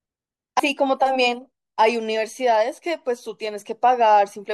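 Compressed frames skipped at 0.58 s: a stretch of roughly a tenth of a second of the speech goes missing as the decoder drops whole compressed frames, which fits about four frames of 23.2 ms. The speech jumps ahead at the join.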